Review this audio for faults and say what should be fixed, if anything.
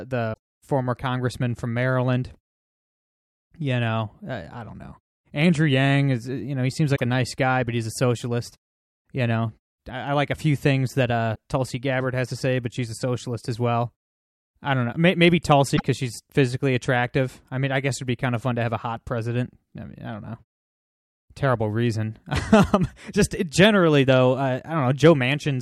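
Damaged data in a compressed stream causes short glitches at 0.30–0.37 s, 6.93–7.01 s, 11.32–11.38 s and 15.73–15.82 s, where corrupted frames throw the decoder out of sync until it finds the next header. The silences in pauses come from muting that fades out and back in cleanly. Verifying the file or stream with checksums and re-fetching damaged segments would prevent it.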